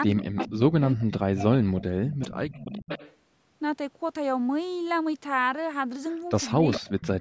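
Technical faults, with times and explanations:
0.06–2.89 s, 6.51–6.67 s and 7.05–7.2 s: speech suppressed in double talk. The speech dips and breaks up in pieces. The first stretch is the longest, with around two seconds affected, and falls by as much as about 30 dB. The later two are brief, dropping by about 15 dB and about 25 dB. Both ends were likely talking at once. The echo canceller could not tell the near talker from returning echo, so it turned everything down.
0.23–0.53 s, 0.82–0.88 s, 2.21–2.29 s, 2.5–3.15 s and 6.71–7.08 s: echo leak. A delayed copy of the speech comes back, trailing the original by 416 ms each time. It is loudest at 0.23 s and 6.71 s, at about 10 dB below the speech. At 0.82 s it sinks to about 25 dB below. These scraps were likely picked up from a loudspeaker and only partly cancelled before being sent back.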